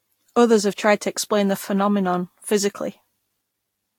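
Throughout this speech, the sound is swirly, hollow and smeared, with blurred attacks and nothing above 19.3 kHz, likely generation loss from about four successive Vorbis re-encodes.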